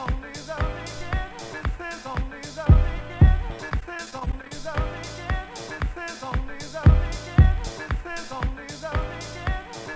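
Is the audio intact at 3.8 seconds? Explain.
No. From 3.70 to 4.51 s the sound turns choppy and robotic, with small pieces dropping out. This is repeated packet loss: packets kept going missing or arriving too late, and each short hole, none longer than 23 ms, was patched by stretching the sound just before it. About 160 ms is missing in total, so roughly a fifth of that stretch is filled-in sound rather than real audio, heard through the call path's 8 kHz ceiling.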